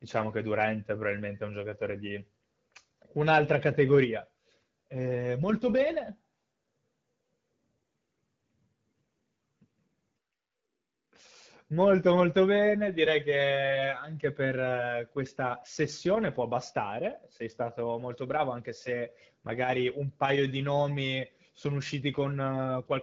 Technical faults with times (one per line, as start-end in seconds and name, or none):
none